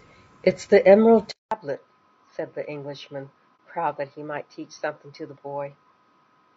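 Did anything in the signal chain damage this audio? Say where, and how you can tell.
Yes. The codec stage shows damage throughout. The speech sounds rough and grainy, with noise filling the gaps between harmonics. That is the sound of low-delay AAC compression, likely AAC-ELD. Its short frames resolve pitch poorly, and the damage is plainly audible, which fits a bitrate around 32 kbps.

At 1.31 s the input was likely switched to a poorer device. There are 200 ms of silence at the switch. Afterwards nothing is heard above 6.2 kHz. The level drops by about 10 dB. A new noise floor sits about 40 dB below the speech until the end.

The network or decoding stage caused AAC frame loss with muting from 3.57 to 3.59 s. The sound fades out and back in, leaving a brief dip about 30 ms long. That fits a single lost frame whose spectrum the decoder zeroed, with overlapping windows smoothing both edges.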